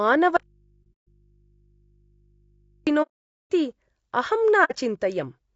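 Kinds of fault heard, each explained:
Low-delay AAC compression: The speech sounds rough and grainy throughout, likely from AAC-ELD coding near 32 kbps. A spectrogram shows noise filling between the harmonics and a thin, synthetic-looking top band.
Audio dropout to a faint residue: From 0.37 to 2.87 s the speech cuts abruptly to faint mains hum about 40 dB down. The waveform shows a near-flat stretch, and the spectrogram shows hum lines.
AAC frame loss with muting: The decoder zeroed missing frames, leaving soft-edged silent holes near 0.83–1.07 s, 3.02–3.49 s and 4.64–4.75 s. The waveform tapers smoothly into and out of each gap.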